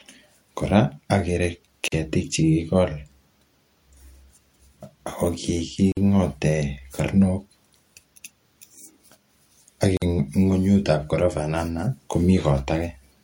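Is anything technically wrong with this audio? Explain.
Yes, the speech has a gap at a join of encoded pieces, heard three times. At 1.88, 5.92 and 9.97 s, silences of 40 to 49 ms break the speech, about 4.0 s apart. Each separately encoded piece kept its leading encoder delay and padded final frame. Unlike a dropout, nothing is lost: the speech resumes where it stopped.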